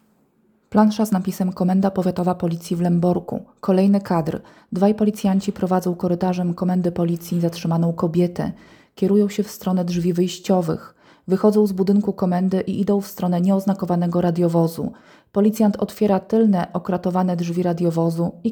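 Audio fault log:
No faults were found in this clip. The audio runs without any break or disturbance that a listener would notice.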